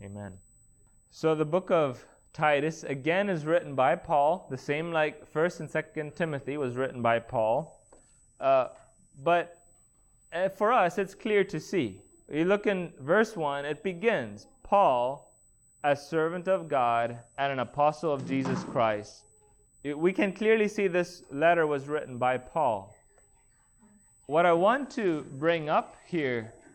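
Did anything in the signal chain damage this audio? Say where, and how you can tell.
Yes. There's USB whine at the analogue wiring stage: a steady 8 kHz tone, about 40 dB below the signal, runs the whole clip. That pitch matches the bus's 125 microsecond microframes, with the current draw leaking into the audio through shared power or ground.

There's also a Bluetooth SBC bit pool drop at the codec stage, at 7.55–9.22 s, 17.02–19.31 s and from 24.82 s to the end. Each time, the treble dulls and gritty noise rises. That fits the bit pool falling from 31 to about 11 (around 83 kbps), which starves the top sub-bands.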